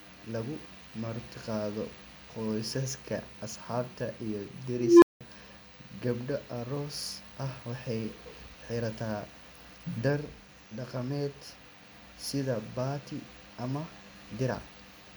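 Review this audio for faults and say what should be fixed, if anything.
An unstable filter fault runs from 4.70 to 5.21 s in the speech. A low tone around 300 Hz swells over about 0.32 s and clips. The recursive filter's output then overflows, leaving about 0.19 s of silence until it resets. To prevent it, check that filter coefficients keep every pole inside the unit circle, and reset state on overflow.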